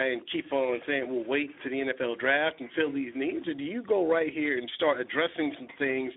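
Throughout, the speech carries plainly audible Speex codec damage: starved CELP excitation makes it hoarse and noisy, consistent with about 11 kbps, band-limited to 300 Hz–3.6 kHz.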